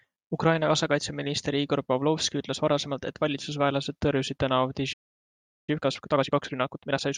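At 4.93 s the player most likely ran dry of buffered data, or its output thread was held up, so nothing reached the output until it recovered at 5.69 s. This is a playback stall: the speech cuts off abruptly in mid-flow and leaves about 0.75 s of dead silence.

From 5.69 s to 7.07 s the player works off the backlog left by the stall by trimming short slices out of the signal and cross-fading across the joins, delivering the audio at 1.5 times its normal rate. This time-compressed catch-up makes the speech sound hurried while its pitch stays unchanged, until normal pacing returns at 7.07 s.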